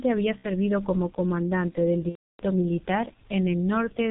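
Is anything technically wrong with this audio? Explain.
Yes, there are two problems. Throughout, the speech carries heavy G.723.1 codec damage: a low-rate telephony coder with 30 ms frames, consistent with about 6.3 kbit/s, discards everything above 4 kHz and tracks the voice coarsely, so it sounds muffled and hoarse. A spectrogram shows a hard ceiling at 4 kHz and smeared consonants.

VoIP packet loss concealed by the speech codec occurs at 0.38–0.45 s and 2.09–2.45 s. The decoder extrapolated from its last pitch and filter while the gain decayed, which fits roughly 60 ms and 300 ms of lost audio. The first gap sounds like a stretched, fading sound; the longer second gap goes silent after its first two lost frames. It appears as a tapering waveform envelope, with weak output continuing briefly afterward.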